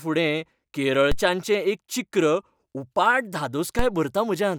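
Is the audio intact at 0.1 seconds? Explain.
Yes, the speech at 0.1 s plays through cleanly, with no dropout, click, distortion or other fault at that moment.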